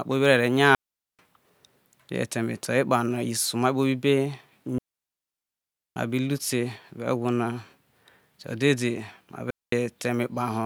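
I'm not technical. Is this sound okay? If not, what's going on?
No. It has digital wireless dropouts: the wireless link loses data and the receiver mutes, leaving clean silent gaps at 0.75–1.19 s, 4.78–5.96 s (over a second) and 9.50–9.72 s.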